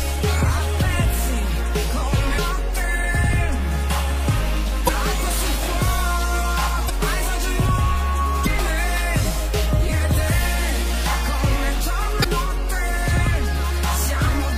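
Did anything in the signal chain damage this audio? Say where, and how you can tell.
Yes, there's damaged data in the compressed stream, so the fault sits at the codec or storage stage rather than in the analogue path. You hear brief glitches at 2.37 s, 4.85 to 4.89 s, 6.86 to 6.90 s, 8.43 to 8.47 s and 12.22 to 12.26 s, each around 40 ms or shorter. Corrupted bytes make the decoder misread or drop frames there and lose sync until it finds the next valid frame header.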